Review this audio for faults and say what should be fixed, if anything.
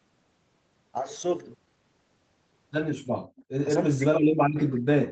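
From 3.19 to 3.35 s the room sound behind the speech drops by as much as about 36 dB for roughly 150 ms, then returns. This is background gated by the echo canceller: while the loudspeaker was playing, the canceller judged the microphone signal to be echo and clamped it hard. Unlike a packet-loss dropout, there is no click, repeat or smeared fill, just a clean dip in the ambience that recovers as the canceller releases. Making the canceller's suppression gentler during double-talk, so it attenuates the microphone less when near-end sound is present, would prevent it. The top end stopping near 8 kHz comes from the call path and fits Opus at a wideband setting around 24 kbps.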